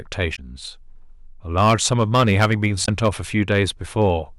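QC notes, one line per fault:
0.22 s, hard clipping. One peak in the speech exceeds the available range by about 1 dB. Its top is cut flat, giving a brief tick.
0.33 to 0.39 s, damaged data in a compressed stream. Corrupt bytes break the decoder's frame sync. It loses lock and hunts for the next valid header. The result is a short glitch.
1.58 to 3.08 s, hard clipping. Here the overload is about 10 dB. Nearly every loud syllable is squared off. Strong high harmonics turn the speech into harsh fuzz.
2.82 to 2.88 s, damaged data in a compressed stream. A second bad stretch of the stream hits inside the clipped section. The decoder misreads those frames and glitches before resyncing.
3.50 to 3.62 s, hard clipping. Peaks overshoot by about 2 dB. Light crackle rides on the loudest sound.
4.02 to 4.10 s, hard clipping. Overshoot is about 1 dB. A faint crackle on the peak.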